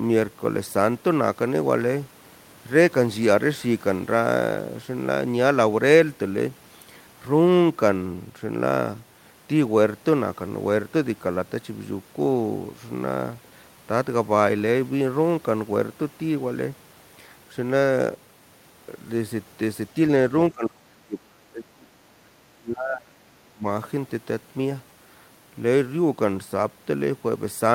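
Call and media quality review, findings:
Speech suppressed in double talk, 20.5–22.04 s: speech level collapses, deepest dips around 30 dB, for roughly one and a half seconds. Second episode 22.53–23.66 s, about a second affected, similar depth. Likely echo canceller or suppressor in double talk: near-end speech mistaken for loudspeaker echo while the far side talks, so the gain is pulled down on the wanted signal too.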